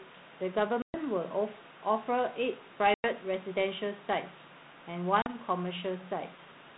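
At 0.82 s, 2.94 s and 5.22 s the speech drops into abrupt silent holes of about 120 ms, 100 ms and 40 ms. This is packet loss on an ADPCM call, where a handful of packets vanish each time. Unlike a plain gap that resumes cleanly, each hole ends with brief distortion or wrong level lasting until 0.97 s, 3.08 s and 5.33 s. The decoder's adaptive predictor and step size must resynchronise, on a lightly coloured, band-limited line consistent with 32 kbit/s G.726.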